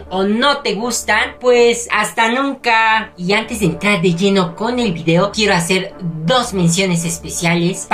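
No technical faults can be heard anywhere in the clip.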